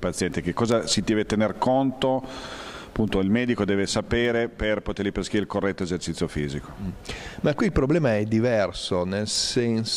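The audio carries word clock ticks from 0.33 s to 9.75 s. Sharp single-sample clicks recur about every 0.4 s, roughly thirty in all. A receiving clock drifting around 50 ppm off the sender causes them.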